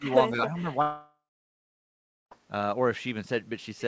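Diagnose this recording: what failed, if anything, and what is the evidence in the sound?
Call processing, at the echo canceller. From 0.00 to 0.64 s the speech level keeps dipping, the deepest by about 15 dB, for roughly a third of a second in total. This pattern is likely speech suppressed in double talk. The canceller could not tell the near talker from loudspeaker echo while both sides spoke at once, so it treated the near-end speech as echo and attenuated it along with the echo.

Network stage. From 0.82 to 2.33 s about 1.5 s of audio never reached the player, which is likely a long network dropout. The receiver first extends the last sound as a fading concealment fill. For about 1.1 s of the gap only silence or faint steady noise remains. Speech resumes at 2.33 s, and the lost stretch is gone. The audio has nothing above 8 kHz throughout, consistent with G.722 wideband coding on the call path.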